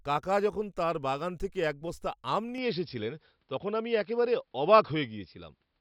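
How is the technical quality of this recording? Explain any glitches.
The quality drops partway through. From 2.58 s, right after "থেকে এক বস্তা আম", the sound changes character and stays that way to the end. The likely cause is an input switched to a poorer device mid-recording. The new input passes nothing above 5.4 kHz, so the speech turns dull and boxy. The level shifts by about 5 dB. A faint new noise floor appears, roughly 55 dB below the speech. There is no gap at the switch.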